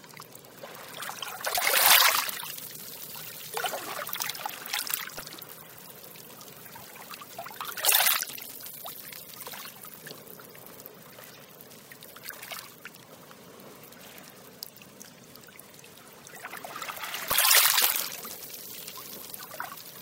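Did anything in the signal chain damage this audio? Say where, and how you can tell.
Yes. At 1.53 to 1.58 s, 5.17 to 5.20 s and 17.29 to 17.32 s the sound jumps ahead with a brief chirp, burst of noise or short hole. That is likely a broken MP3 bit reservoir from codec or storage damage. Frames of about 24 ms were removed, and the next frames looked back for borrowed bytes and found another frame's data instead. A network dropout would leave a gap or a repeat, not a noisy skip.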